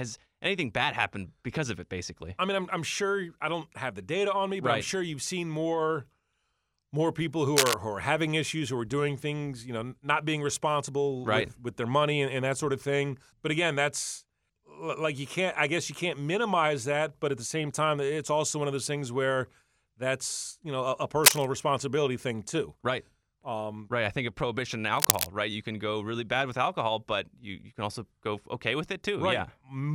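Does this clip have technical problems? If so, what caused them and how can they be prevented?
Yes. Short bursts of scratching, rustling noise sit over the speech at 7.56 to 7.75 s, just after "more people who"; at 21.24 to 21.47 s, after "you know a a"; and at 24.97 to 25.27 s, after "think of prohibition and". The middle burst is the loudest, at about 10 dB above the speech, and the other two are about 5 dB above it. This is cable scratch noise, likely from a worn cable, connector or control carrying a DC voltage being moved, so its contact resistance fluctuates rapidly and adds uneven noise. Securing cables so they cannot shift, and replacing worn leads or connectors, prevents it.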